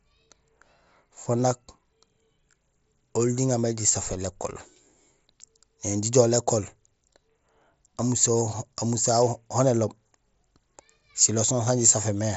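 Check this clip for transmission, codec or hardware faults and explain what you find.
No transmission, codec or hardware faults are present: the speech comes through the Bluetooth mSBC headset codec working as intended, with the expected ceiling of nothing above about 7.7 kHz and only the light grain that codec leaves on louder sounds.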